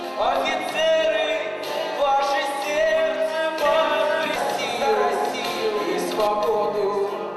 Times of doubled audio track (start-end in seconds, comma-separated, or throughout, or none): 3.65-6.27